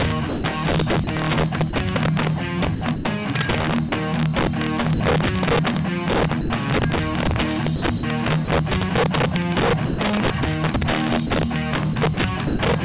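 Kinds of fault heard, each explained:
Integer overflow: The level is driven about 10 dB too hot, and the samples that exceed the integer ceiling wrap around to the opposite extreme instead of being held there. Only a small share of samples, a few percent, go over. Each one still produces a harsh, violent crack on the loud moments throughout the clip. These cracks are far sharper than ordinary clipping, because the waveform jumps across its whole range.
Sound chopped by the voice detector: Over four stretches, the sound repeatedly drops out and comes back in quick succession. These run from 0.29 to 1.73 s, 2.75 to 3.05 s, 7.76 to 8.48 s and 11.27 to 12.59 s. Short pieces are replaced by synthetic comfort noise, totalling 210, 150, 150 and 210 ms respectively. The result is choppy. This is likely a voice detector toggling transmission on and off.
Sound dropped by the voice detector: At four single points the sound gives way to steady comfort noise and then returns. 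These gaps come at 3.89 s for 30 ms, 4.94 s for 60 ms, 6.41 s for 90 ms and 9.86 s for 120 ms. The original sound in each gap is lost. The narrowband call path, with nothing above 4 kHz, keeps the fill noise dull. The likely cause is a voice detector mistaking quiet sound for background and briefly stopping transmission.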